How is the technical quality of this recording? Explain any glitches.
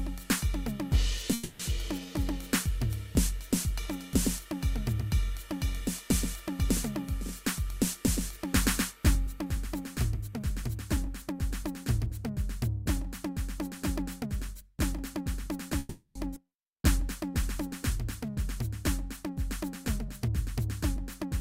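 The recording's technical quality is poor: network delivery problems cause repeated timing glitches in this music clip, including two freezes, two speed-ups, a skip and a slow-down.

Call audio freeze, at 1.33 to 1.61 s and again at 15.79 to 16.17 s. Packets were likely held up in transit and the jitter buffer ran dry, so the receiver kept extending the last sound. You hear the music stall into a fading buzzy continuation for 0.26 s and then 0.36 s. When the audio resumes it picks up where it stopped, so no music is lost, but each freeze pushes everything after it later by that amount.

Jitter buffer speed-up, at 8.37 to 11.85 s and 14.25 to 15.71 s. The buffer held more audio than it needed. The receiver trimmed it by cutting many tiny pitch-period slices. The first stretch plays at 104% speed and loses about a seventh of a second. The second runs at 106% and loses about a tenth. The pitch stays put, but the music loses its steady tempo.

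Skip ahead, at 16.35 to 16.38 s. Right after the second freeze, later audio was already queued. Roughly a fifth of a second of music was dropped. Playback jumps forward with only a 10 ms patch bridging the two sides, so a small chunk of the music simply vanishes and the join is nearly abrupt.

Jitter buffer slow-down, at 16.69 to 18.33 s. The buffer was running low or had just raised its target delay, so it needed a reserve. The receiver built one by repeating single pitch periods many times in a row, adding 79 ms in total. The music plays at 96% speed with unchanged pitch, so the phrasing drags slightly and sustained sounds stretch.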